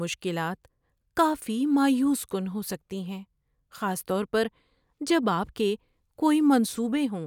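No technical faults are audible.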